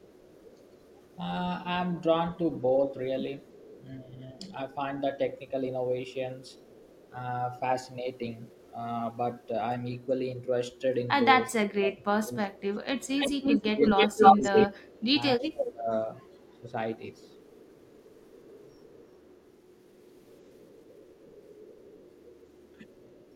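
Echo leak: the far end likely plays the call over a loudspeaker, and its echo canceller lets part of the returned signal through. A faint copy of the speech, delayed by 379 ms and roughly 30 dB or more below the direct sound, trails it from 0.0 to 1.16 s, 3.47 to 3.85 s, 6.49 to 7.1 s and 8.45 to 10.06 s.

Speech suppressed in double talk: when both sides are active, the canceller probably cannot separate the local talker from the loudspeaker echo and turns everything down. From 4.06 to 4.44 s the speech dips briefly by a few decibels. From 11.57 to 16.75 s it drops much harder, by around 20 dB, over about three seconds in total, so the talker sinks and fades in pieces.

From 13.0 s to the end, the echo leak returns with a shorter 310 ms delay and becomes far stronger, only about 5 dB under the speech. This loud delayed copy doubles the voice and overlaps the deep suppression still under way.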